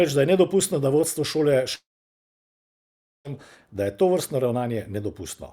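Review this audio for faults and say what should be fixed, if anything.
From 1.75 to 3.28 s, after "nedopustno da vodstvo šole", the speech smears into a brief fading buzz and then about 1.4 s of silence before resuming at "da je tovrstno", with roughly 1.5 s lost. This is likely a long network dropout, with the receiver concealing the gap before giving up. A spectrogram shows a short blurred tail, then a blank band. The waveform goes flat.

To prevent it, use a more stable connection with larger jitter buffering or retransmission, or record locally and upload afterwards.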